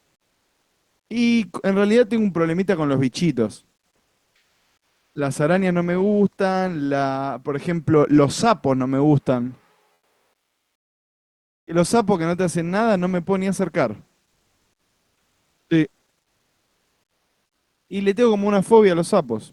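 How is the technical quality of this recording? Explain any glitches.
The recording has one recurring glitch: in the pauses between speech, the real background is replaced by comfort noise. This happens five times: 0.00–1.09 s, 3.95–5.15 s, 9.93–11.67 s, 14.33–15.69 s and 16.21–17.87 s.

The likely cause is Opus discontinuous transmission. When the sender's voice detector hears no speech, it stops sending audio. The receiver then fills each gap, between 1.1 and 1.7 s long, with generated noise that only roughly matches the background's spectrum.

The background already sits about 54 to 59 dB below the loudest speech. Each pause sounds flat and featureless, smoother than the real background. The level also shifts at the gaps: about 4 dB quieter in the first pause, about 1 dB louder in the second, about 2 dB quieter in the third, about 6 dB louder in the fourth and unchanged in the last.

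The call codec limits the audio to about 12 kHz at the top and adds its usual coding noise, which fits an Opus stream at a moderate bitrate.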